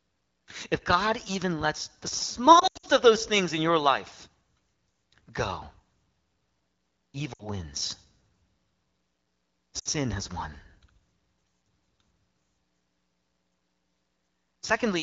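Lost AMR speech frames occur at 2.59–2.87 s, 7.34–7.48 s and 9.79–9.88 s. The decoder covers the damaged stretches by repeating its last pitch and vocal-tract settings at falling gain, which sounds like warbly, smeared dips. On a spectrogram, harmonics freeze and fade, and the waveform envelope sags.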